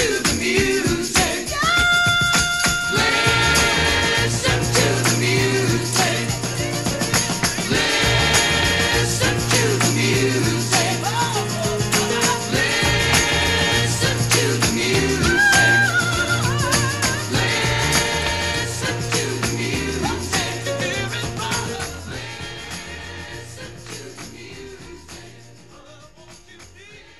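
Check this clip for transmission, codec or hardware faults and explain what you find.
There's one fault, and it sits right at the end. From 21.76 s to the close there's channel delay (comb filtering): one channel lags the other by about 20 ms before the mono sum, so shared content cancels at evenly spaced notches from around 20 Hz upward, leaving a rough, slightly doubled sound.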